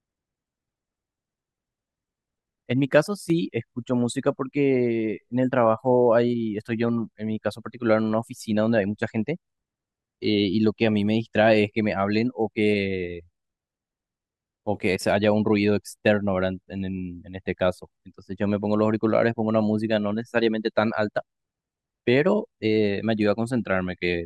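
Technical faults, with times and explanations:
3.08–3.30 s, one channel drops out: for about 0.22 s the speech level falls abruptly by about 6 dB and then snaps back just as suddenly. The likely cause is one side of a stereo feed vanishing, so the mono sum keeps only half of the shared signal. On the waveform this shows as a short, flat-topped dip to roughly half amplitude with sharp edges. On a spectrogram, the whole band dims evenly, with no change in spectral shape.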